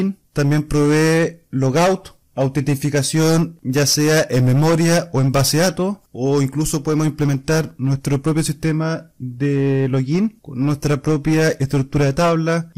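Harsh fuzz sits on every loud moment throughout: hard clipping, with peaks driven about 12 dB past the limit and flattened, affecting roughly a tenth of the audio.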